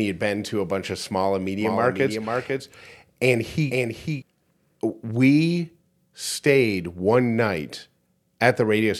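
Right after "bunch of small and", from 1.60 to 4.22 s, there's a doubled audio track: a second, dry copy of the speech trails about half a second behind, a few dB quieter, switching on and off abruptly. It's likely a slower capture path mixed back in.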